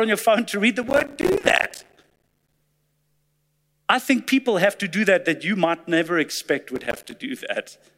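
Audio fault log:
0.83–2.58 s, processor overload crackle, starting just after "phone to read the": a dense, gritty tearing rides on the speech for about 1.75 s. The processor falls behind and misses many short buffer deadlines in a row, each leaving a hard-edged gap of silence. The spacing suggests buffers of roughly 5 ms.
6.76–7.12 s, processor overload crackle, after "you might never expect": a shorter burst of the same crackle, stopping once the load eases.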